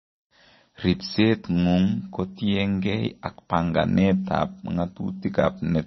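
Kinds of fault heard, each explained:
MP3 compression: The audio was likely starved of bits by a low-bitrate MP3 encoder, at a rate that points to roughly 27 kbps. Everything above 5.9 kHz is cut away, dulling the speech, and heavy damage leaves a watery, swirly texture throughout.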